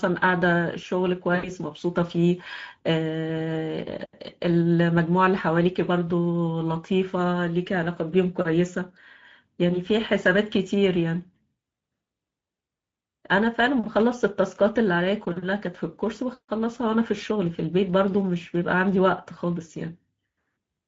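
Throughout the speech, Speex codec coding leaves a hoarse, noisy texture at about 17 kbps; the spectrogram shows blurred harmonics. From 1.35 to 1.52 s, VoIP packet loss concealed by the speech codec stretches the last sound out as it fades, consistent with about 80 ms (four 20 ms frames) lost. The waveform shows the stretched sound shrinking in amplitude.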